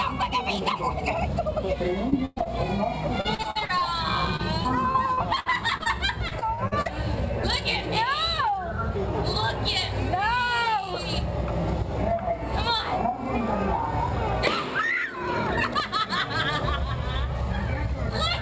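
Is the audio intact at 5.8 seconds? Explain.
No. At 5.8 seconds the audio sits inside repeated packet loss (robotic sound) from 4.36 to 5.88 s. About ten short holes, the longest 61 ms, are filled by stretching the last sound. The result is choppy and robotic, with pieces missing.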